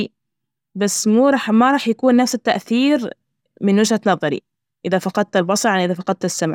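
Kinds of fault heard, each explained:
No technical fault can be heard anywhere in the speech recording.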